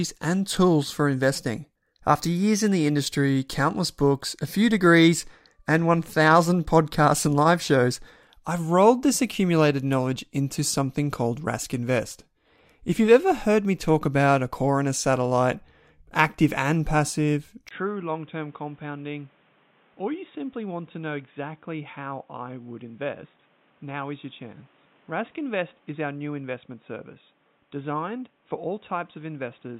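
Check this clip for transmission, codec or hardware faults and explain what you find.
One fault stands out: the input switched to a poorer device. It happens at 17.69 s, just after "satellite active and passive", and lasts to the end. A brief gap of about 20 ms marks the switch. The likely cause is the system changing to another microphone or a headset profile. The new path passes nothing above 3.8 kHz, so the speech turns dull and boxy. It also drops roughly 10 dB in level. A new background noise sits around 30 dB below the speech.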